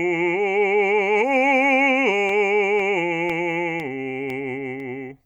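From 2.29 s to 4.80 s the music carries periodic USB or driver dropouts: every 0.5 s a sub-millisecond gap, roughly half a millisecond, falls silent as the driver path stalls, giving about seven evenly spaced ticks riding on the signal.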